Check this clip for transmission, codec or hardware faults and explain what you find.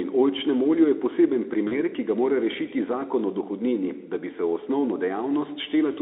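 One transmission fault is audible in this speech clip, carried over a Speex link band-limited to roughly 300 Hz to 3.6 kHz. VoIP packet loss concealed by the speech codec occurs from 1.67 to 1.75 s. About 40 ms of audio went missing, which fits two lost frames. The decoder filled the gap by repeating its last pitch and spectral shape at falling gain, so the sound smears into a brief buzzy tone or coloured noise that fades. It stays thin or distorted as the decoder recovers.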